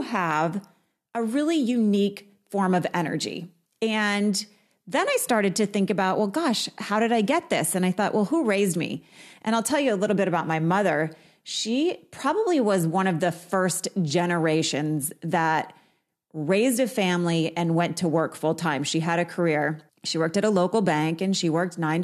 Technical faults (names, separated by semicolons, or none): none